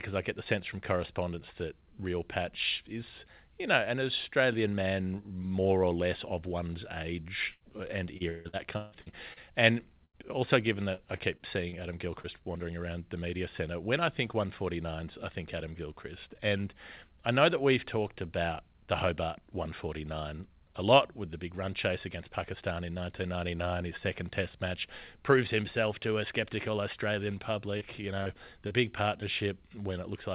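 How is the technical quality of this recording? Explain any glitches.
The recording has several packet-loss glitches in the middle and near the end. The band stops at 4 kHz throughout, which fits a narrowband call codec such as G.711 mu-law.

Repeated packet loss (robotic sound) occurs from 7.52 to 9.39 s, with seven gaps. The longest is 155 ms, and about 29% of the span is filled in. It occurs again from 10.94 to 12.27 s, with five shorter gaps of up to 36 ms. Each hole is patched by extending the preceding sound, so the speech turns choppy with pieces missing. A spectrogram shows smeared, flattened harmonic stretches alternating with the normal pattern.

A burst of packet loss falls between these stretches, from 10.05 to 10.16 s, with about 90 ms of audio missing. The receiver stretched the last sound and faded it, which gives a brief held, fading sound before the speech resumes further on. 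The waveform shows a decaying, oddly regular patch.

Short concealed packet loss occurs at 27.78, 28.23 and 28.68 s, each losing about 30 ms. These are synthesized fills blended back into the real signal, and each is heard as a quick smear or wobble. A spectrogram shows each one as a thin, slightly blurred vertical slice.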